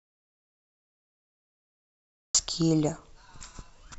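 From the very start the clip is an audio dropout to silence: plain silence, not even room tone, until speech comes in abruptly at about 2.35 s. It's likely the input was lost while the recorder kept writing, so anything said during that stretch is simply gone.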